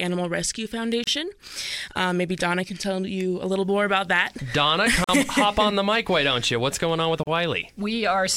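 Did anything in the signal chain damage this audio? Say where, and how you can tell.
Yes. At the codec stage there's a gap at a join of encoded pieces at 1.04, 5.04 and 7.23 s. These are 32 to 46 ms dropouts left by untrimmed encoder delay and padding.

From 3.58 s to the end there's video or display buzz at 60 Hz, roughly 35 dB down. A screen or video cable is leaking into the analogue wiring.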